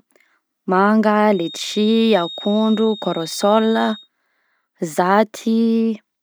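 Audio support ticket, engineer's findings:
Thin, steady 3.7 kHz whistle under the speech, 1.25 to 4.09 s, roughly 15 dB down, level wavering. Feedback whistle, likely a speaker-to-mic loop held at threshold.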